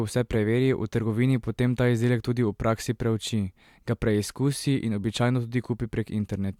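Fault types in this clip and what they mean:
No technical faults are audible anywhere in this speech recording.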